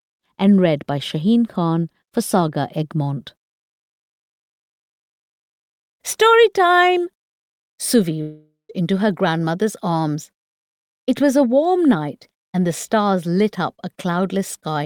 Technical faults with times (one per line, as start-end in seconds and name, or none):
8.21-8.71 long network dropout